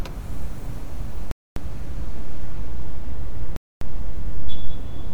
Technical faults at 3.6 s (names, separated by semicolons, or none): gap between chunks